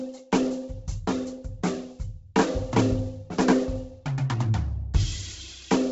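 A music clip with heavy Bluetooth LC3 compression damage running throughout. Nothing survives above about 7.7 kHz, so the top end sounds dull, while the upper band that remains has a breathy, grainy edge where detail has been replaced by noise fill, a texture that fits a low bitrate near 16 kbps with 10 ms frames. On a spectrogram there is a hard ceiling at 7.7 kHz and a speckled, noisy band just below it. This is likely LC3 coding over Bluetooth LE Audio.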